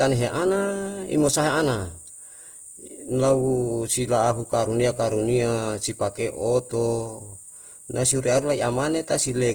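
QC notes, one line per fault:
Throughout: Opus compression. The speech has a rough, grainy texture, with the harmonic parts of the voice turning noisy instead of clean, yet there is little swirling and the top end still reaches about 20.1 kHz, so it doesn't sound muffled. This is likely Opus in its fullband music (CELT) mode short of bits, keeping each band's energy but filling detail with folded or noise content, which fits a rate around 16 kbps.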